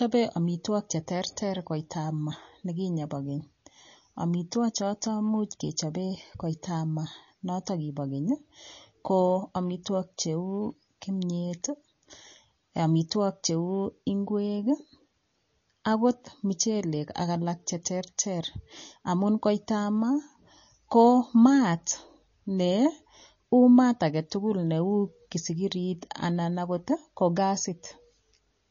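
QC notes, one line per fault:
Throughout: MP3 compression. The treble stops dead at 7 kHz, a hard flat ceiling on the spectrogram with nothing above it. Below that, the finer detail breaks into flickering patches as weak frequency components switch on and off from frame to frame, giving the speech a watery, swirling edge, metallic chirps on s sounds and smeared onsets. The damage is plainly audible and is likely an MP3 encoder starved of bits, which fits a low bitrate of around 32 kbps.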